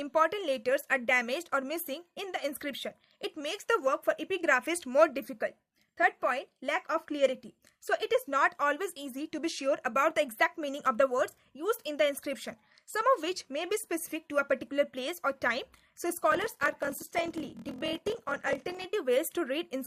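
From 16.30 s to 18.85 s there is a block size mismatch (padded). One stage hands over blocks that are too short for the stage reading them, and each shortfall is filled with silence. The repeated gaps produce a 41.7 Hz buzz, which fits 1024-sample blocks read as roughly 1152 at 48 kHz. The audio slows to 0.889 of normal speed while its pitch stays put, which rules out a sample-rate mismatch.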